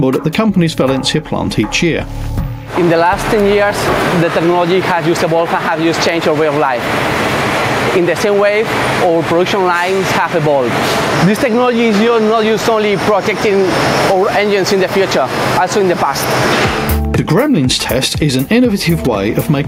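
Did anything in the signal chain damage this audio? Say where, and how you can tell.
Yes. Gain pumping runs through the whole clip. The gain ducks by around 10 dB under each loud sound, and the waveform shows a flattened, squashed envelope. The likely cause is excessive input gain feeding a fast limiter or compressor.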